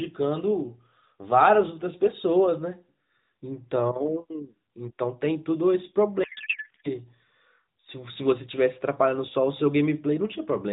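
From 6.24 to 6.88 s, a codec payload misread replaces the speech with garbled noise and warble that barely follows it. The sender packed the AMR frames octet-aligned. The receiver parsed them as bandwidth-efficient. So the decoder read plausible frames with every field shifted. The garble ends once both sides agree on the format again. Around it, the AMR narrowband path carries the speech with light codec damage and nothing above 4 kHz.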